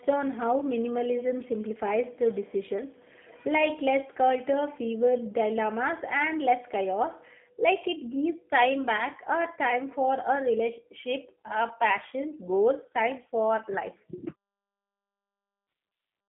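From start to finish the speech sounds thin, boxy and faintly synthetic, with a rough, buzzy edge on every phrase. Nothing below about 150 Hz or above 3.5 kHz comes through. This is the damage of the G.729 codec, here its G.729A form. It rebuilds each 10 ms frame from a vocal tract filter, a pitch predictor and a few coded pulses rather than the real waveform, at a rate that fits 8 kbit/s.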